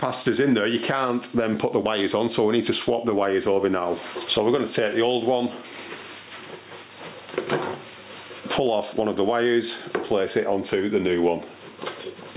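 Throughout, the gain swings up and down, roughly 20 dB apart, and loud and soft parts end up closer in level. This is gain pumping, likely from input gain set far too high with a fast limiter clamping it. Nothing reaches above 4 kHz, which fits a narrowband call codec such as G.711.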